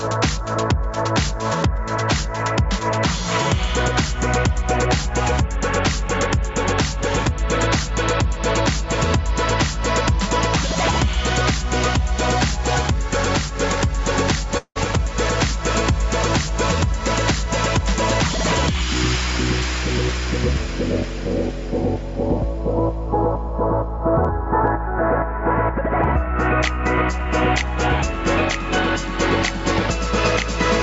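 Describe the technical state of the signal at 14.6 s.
At 14.57 to 14.78 s there is a call audio freeze, likely from delayed packets draining the jitter buffer. The last sound is stretched into a fading buzz or hiss, then about 80 ms of silence. Unlike a dropout, the audio then resumes where it stopped, so nothing is lost; it is just pushed about 0.18 s later.

Gain pumping is also present here. The level swings by around 5 dB against loud sounds, which sets it apart from steady background noise.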